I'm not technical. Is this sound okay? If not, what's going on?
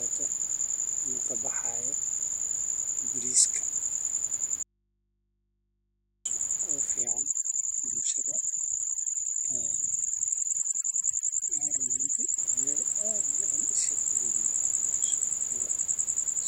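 No. From 4.63 to 6.25 seconds the speech suddenly vanishes for about 1.6 seconds, leaving only a faint electrical hum, and then snaps back. This is an audio dropout to a faint residue. The cut is instant, not a natural pause or a gentle fade, and the hum shows the line stayed open while the speech itself was missing, likely from a brief break in the connection between the microphone and the recorder.

From 7.02 to 12.38 seconds the gaps between phrases drop to an unnaturally dead silence with small twinkling specks. That is overdone noise removal: a cleanup tool set far too strong, cutting away the quieter parts of the voice along with the background. Unlike the dropout, the speech never disappears here; it stays present. Outside that stretch a gentle room background sits well beneath the speech.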